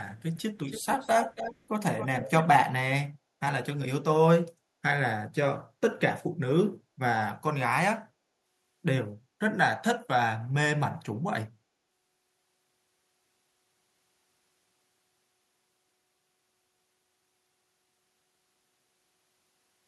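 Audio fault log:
0.19–0.42 s, 0.67–1.57 s, 1.98–2.43 s, echo leak: the far-end echo canceller likely passed loudspeaker pickup, so speech returns roughly 0.3 s late, from barely audible to prominent.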